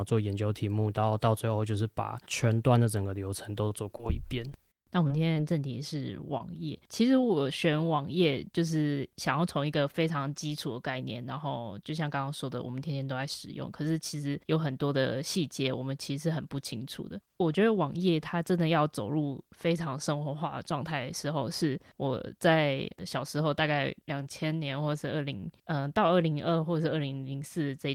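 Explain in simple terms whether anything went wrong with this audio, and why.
Between 3.65 and 5.38 s there's a run of scattered short gaps. Around seven tiny bits of the speech went missing, none longer than about 30 ms. Each time, the receiver papered over the hole by carrying the last sound forward, so you hear little ticks and hiccups.

At 6.38 to 6.42 s there's a short concealed packet loss. About 20 ms of audio never arrived in time, and the receiver filled roughly 22 ms by extending what came just before, then blended back in. It comes across as a quick smear.

At 7.21 to 7.25 s comes a short stall from a late packet. The next chunk showed up late, so the player held the previous sound for 16 ms until it arrived, then carried on where it left off. Nothing's actually lost, but that moment drags slightly.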